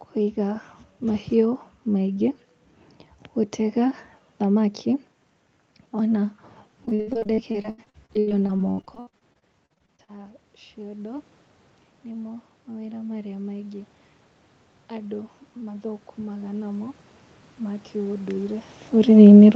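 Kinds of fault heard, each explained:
Repeated packet loss (robotic sound): From about 6.85 to 10.10 s the stream keeps dropping out in short bursts, several dozen of them, the longest around 79 ms. Each hole gets patched by stretching the last bit of sound, so roughly a third of that stretch is filler and about a second of real audio goes missing in total. That's why it turns choppy, with pieces missing.
Automatic gain rising: This happens twice, from about 12.01 to 13.94 s and again from 14.95 to 17.02 s. Each time the gain control decides the input is too quiet and nudges itself up by about 4 dB over a second or two. The first rise follows the input falling by about 17 dB, so the voice and the room noise swell back up together instead of the level holding steady.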